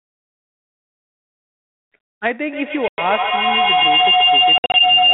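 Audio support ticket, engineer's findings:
Packet loss on the ADPCM call, 1.02–1.30 s, 2.88–2.99 s, 4.58–4.81 s. Hard silent gaps; longest 120 ms. Predictor and step size desynchronise, so speech returns slightly distorted.

Feedback howl, 2.49 s to end. Two devices in one room form a rising loop. Tone around 3 kHz, loop repeating roughly every 150 ms, peaking about 8 dB above speech.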